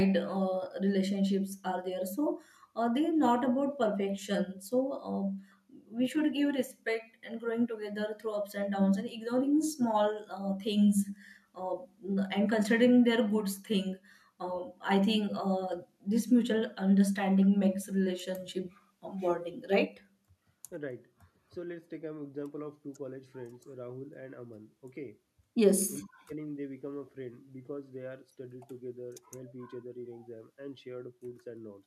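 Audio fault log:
No fault can be heard anywhere in this speech recording. There is nothing here that calls for a timed entry.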